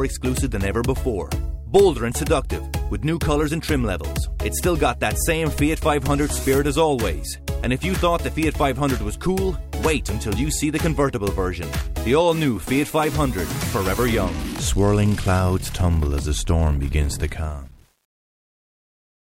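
The clip ends with a fade-out that starts around 17 s and runs to the end at 19.3 s, and from 17.22 s to the end it carries truncation distortion on a fade. The level stage drops low-order bits without dither, which fits a word length of about 9 bits. From 17.57 s onward the tail turns gritty. A zoomed waveform shows staircase steps, and a spectrogram shows broadband grainy speckle.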